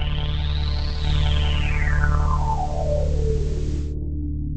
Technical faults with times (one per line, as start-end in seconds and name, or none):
0.90-3.95 digital radio blending to analogue